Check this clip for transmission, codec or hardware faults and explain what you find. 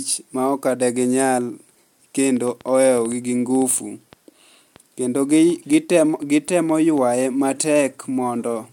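One hardware-type fault is present. From 2.37 to 6.99 s there is a train of clicks: about twenty similar pulses at 3.9 per second, irregularly spaced, peaking roughly level with the speech. The likely cause is interference from nearby equipment or a faulty connection or power supply injecting repeated pulses. They are heard as uneven popping ticks on top of the speech.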